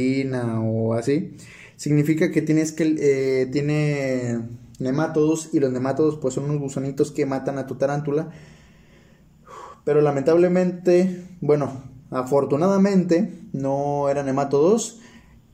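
A steady buzz rides on the sound from start to finish, repeating at 50 Hz and present only while there is signal. This is a resampler restarted on every block: the 48 kHz to 44.1 kHz conversion ran on each 20 ms block separately, leaving a small error at every block edge.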